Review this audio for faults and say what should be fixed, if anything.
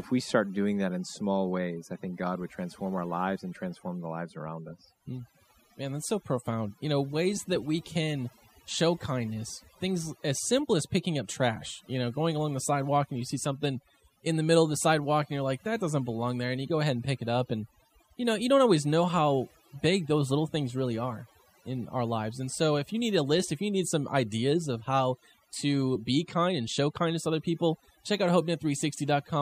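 Overdone noise removal runs throughout: bands near the noise estimate are gated off, leaving near-silent gaps with twinkling specks, shown on a spectrogram as scattered isolated dots. Prevent it by setting the noise reduction more gently and comparing against the unprocessed recording.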